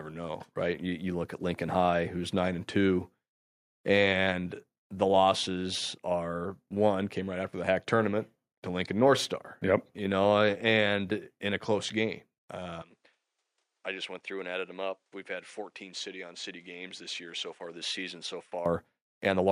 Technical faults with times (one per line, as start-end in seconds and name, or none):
12.82-18.66 input switched to a poorer device